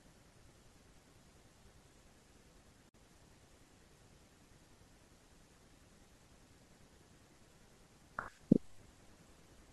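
Separately encoded pieces of this speech recording were joined untrimmed, leaving a gap at the join: a 52 ms gap from 2.89 to 2.94 s with smeared edges.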